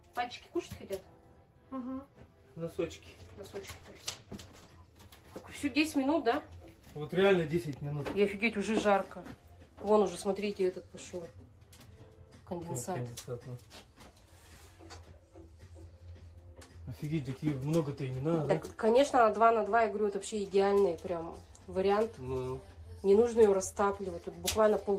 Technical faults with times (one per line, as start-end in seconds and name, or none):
3.25-4.81 call bitrate drop